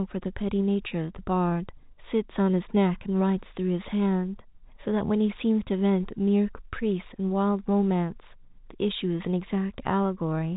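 Nothing stood out on listening to this speech, which comes through the G.711 telephone path with its usual band limit near 3.8 kHz.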